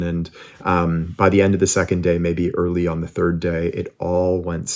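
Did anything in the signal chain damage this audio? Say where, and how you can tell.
No, nothing stood out on listening: the speech passes through call microphone processing with its normal bass roll-off and nothing above 8 kHz, and no stage in the chain left any audible damage.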